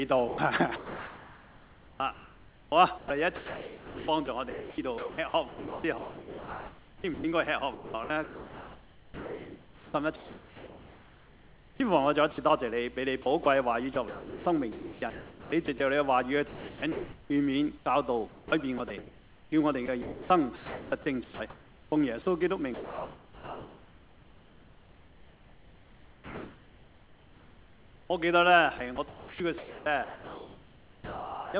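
From 0.28 to 11.8 s the sound is choppy. Quiet edges and softer passages drop out, and the background flickers between real ambience and a flat synthetic hiss, with about 8.4 s of that stretch replaced in total. This is sound chopped by the voice detector: the sender's detector likely switched between sending and pausing again and again, and the receiver filled each gap with comfort noise. Throughout, the audio is band-limited to about 4 kHz, which fits a G.711 mu-law call path at 64 kbps.

At 12.32 to 12.38 s, a 60 ms piece of sound vanishes into steady noise and then returns. This is sound dropped by the voice detector. The detector likely classed that brief, quiet moment as background and stopped sending, so the receiver played comfort noise for those 60 ms.

The same choppy, flickering texture returns from 13.22 to 15.8 s, with about 1.2 s replaced. It comes back from 16.48 to 21.92 s, with about 2.9 s replaced, and again from 28.78 to 31.54 s, with about 2.1 s replaced. 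Each is a further stretch of sound chopped by the voice detector, likely caused by the same rapid toggling between transmission and comfort-noise fill.

From 22.74 to 28.1 s the background loses its detail and becomes a smooth, unchanging hiss, about 3 dB quieter than the real ambience. That ambience sits about 28 dB below the loud parts. This is comfort noise in place of the background. With no sound detected, the sender likely paused transmission, and the receiver synthesised noise roughly matched to the background's level and colour.

At 28.07 to 28.1 s, as the sound resumes, it starts abruptly, with its first 30 ms missing and no soft lead-in. This is an onset clipped by the voice detector. The detector likely reacted late to the restart, so those opening milliseconds were never sent and comfort noise covered them.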